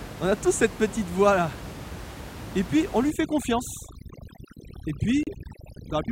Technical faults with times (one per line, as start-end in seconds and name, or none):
3.10-6.11 overdone noise removal
5.23-5.29 corrupt frame decoded